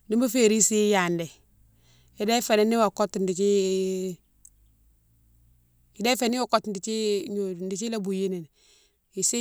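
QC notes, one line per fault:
6.29–9.41 s, sudden gain jump: speech and noise floor drop together by about 4 dB, likely an unramped digital gain change; waveform envelope steps down abruptly.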